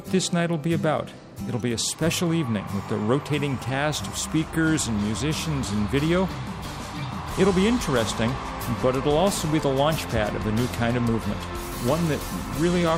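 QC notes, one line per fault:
No technical fault can be heard anywhere in the signal.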